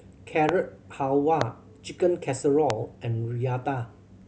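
Three loud pops hit the speech at 0.49–0.51, 1.41–1.44 and 2.70–2.72 s, each a sharp click roughly 20 dB above the signal, likely from a stray electrical pulse.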